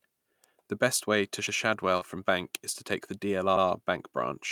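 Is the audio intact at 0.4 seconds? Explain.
No. At 0.44 s an electrical switching spike lands on the speech, a sharp snap most likely picked up from a nearby switch arcing into the audio line. On the waveform it shows as a narrow spike, and on a spectrogram as a thin vertical broadband line.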